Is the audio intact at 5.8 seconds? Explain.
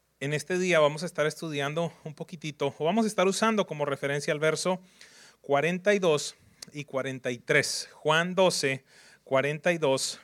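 Yes, at 5.8 seconds the speech plays through cleanly, with no dropout, click, distortion or other fault to be heard at that moment.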